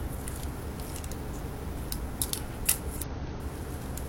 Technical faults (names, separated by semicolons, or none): damaged data in a compressed stream